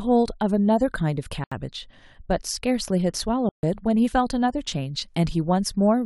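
At 1.44 s and 3.49 s the speech drops to silence for 76 ms, then 141 ms. Each gap is likely a Bluetooth stall, where delayed packets emptied the headphone buffer.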